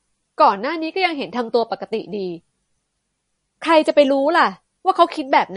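Throughout, the speech sounds watery and swirly with nothing above 10.6 kHz, likely MP3 compression at a bitrate near 40 kbps that discards treble and weak detail.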